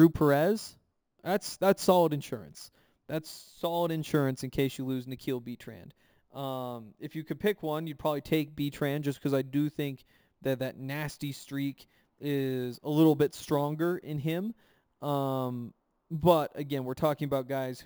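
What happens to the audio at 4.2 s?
At 4.2 s the speech carries imaging from sample-and-hold upsampling, present for the whole clip. Each sample was held rather than smoothed, which points to a 16 kHz source raised to 44.1 kHz. Mirrored copies fill 8 to 16 kHz at about -23 dB. They sound like a bright metallic fizz that tracks the speech.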